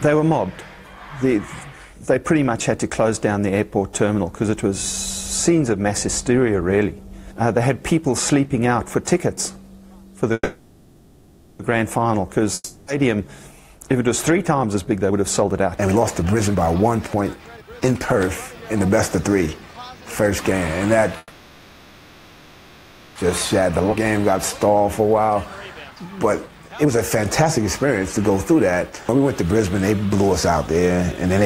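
At 10.33 s packets were likely held up in transit and the jitter buffer ran dry, causing a call audio freeze. The last sound is stretched into a fading buzz until 11.61 s. The audio then resumes where it stopped, so about 1.26 s of gap is inserted and nothing is lost.

From 12.54 to 12.90 s a long network dropout likely cuts off the incoming audio. The final fragment trails off as a brief fading hiss. When the audio returns, about 0.34 s of the original is simply gone.

Between 14.74 and 20.87 s the jitter buffer held more audio than its target, and the receiver performs a jitter buffer speed-up by trimming short pitch-period slices again and again. Playback runs at 121% with the pitch unchanged, shedding around one and a half seconds and sounding hurried.

A second call audio freeze runs from 21.18 to 23.18 s. The sound again smears into a decaying buzz, inserting roughly 2 s of delay with nothing missing afterwards.

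From 23.61 to 29.55 s another speed-up plays the audio at 113%, removing around 0.7 s of built-up delay with the same rushed feel. Within it, at 23.92 to 23.95 s, a skip ahead drops roughly a second of waiting audio. Playback leaps forward almost seamlessly, joining the two sides nearly directly.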